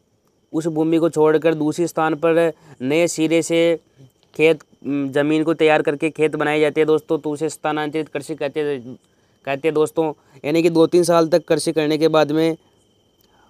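No technical faults can be heard anywhere in the recording, which carries its audio without any disturbance to the signal.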